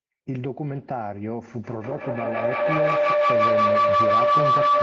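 A feedback howl starts at 1.64 s: a microphone and loudspeaker on the same call form a loop that gains level each trip. It grows into a tone near 1 kHz, with repeats about every 150 ms and reaching about 10 dB above the speech, until the end.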